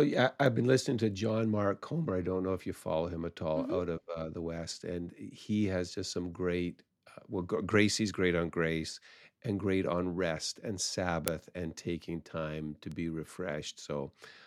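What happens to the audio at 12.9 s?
A bit error spike occurs at 12.92 s. A single bit flipped in memory or on a digital link corrupted a run of consecutive samples, on the order of three. Their values jumped by a power of two and then snapped back. Because the jump has nothing to do with the speech waveform, it sounds like one isolated sharp tick, broadband and peaking at about -31 dBFS, lasting only a fraction of a millisecond.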